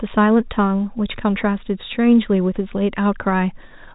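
No technical faults are audible in the speech; it carries the usual telephone-band character of G.711 A-law coding at 64 kbps, with nothing above roughly 3.8 kHz and at most a faint trace of the format's level-following quantisation noise.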